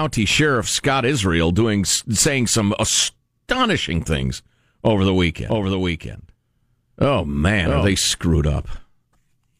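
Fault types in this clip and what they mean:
Doubled audio track: The speech plays twice from 5.50 to 7.94 s. A second full-band copy trails about 0.7 s behind, a few dB quieter, with no decay or room colour. It starts and stops abruptly. A slower second capture path or an edit holding two copies out of step is the likely cause.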